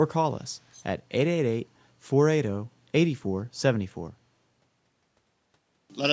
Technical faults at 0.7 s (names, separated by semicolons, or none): echo leak